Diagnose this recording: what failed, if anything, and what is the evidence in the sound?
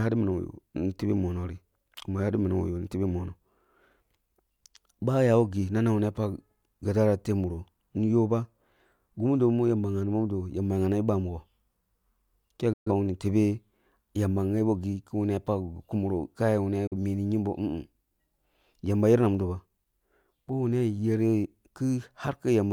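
Digital broadcast dropout at the reception and decoding stage: the speech fades out over about 8 ms and falls silent from 12.73 to 12.90 s, then again from 16.87 to 16.96 s. The receiver muted on lost or corrupt frames, so that material is gone. Unlike packet-loss concealment, the gaps hold true silence rather than smeared or repeated sound.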